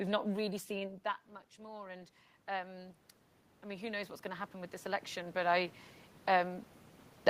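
Automatic gain rising occurs from 1.55 to 3.05 s, just after "really seen that much", and again from 3.62 to 5.82 s. Each time the input fell by about 15 dB, and the gain control crept upward by about 6 dB, then about 8 dB, so voice and room noise swell together.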